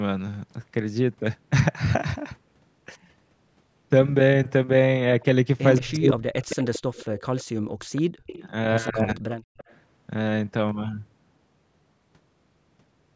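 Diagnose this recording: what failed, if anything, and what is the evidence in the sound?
Echo leak, in the call processing: a delayed copy of the speech comes back at 5.21–5.25 s, 6.5–7.44 s, 7.96–8.48 s and 9.57–9.74 s. It trails by 169 ms and then 200 ms, sitting roughly 20 to 35 dB under the direct speech. The likely cause is a far-end loudspeaker whose echo canceller didn't fully subtract the pickup.

Speech suppressed in double talk, also call processing: the speech ducks hard at 5.79–6.72 s, bottoming out around 40 dB down for roughly 0.7 s total, and again at 8.89–9.23 s, about 20 dB down for roughly 0.3 s. Both sides were likely talking, and the canceller attenuated everything.

Background gated by the echo canceller: at 9.51–9.57 s the room sound drops out by about 40 dB for roughly 70 ms, then snaps back just as the 9.57 s echo burst arrives. That's the canceller clamping the mic while the loudspeaker plays, then releasing.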